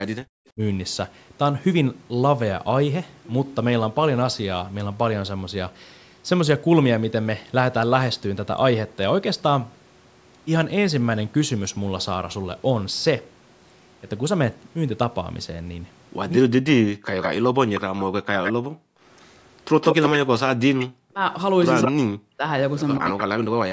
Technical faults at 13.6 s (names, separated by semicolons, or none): none